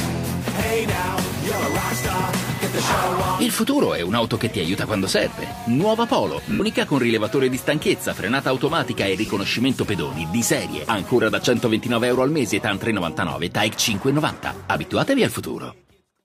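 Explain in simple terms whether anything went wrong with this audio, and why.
A short hiss-like smear replaces the sound at 6.50 s for about a tenth of a second, and a briefer blip follows at 9.26 s. These are lost LE Audio frames: Bluetooth dropped chunks of audio, and the receiver filled each gap by repeating recent sound with scrambled detail.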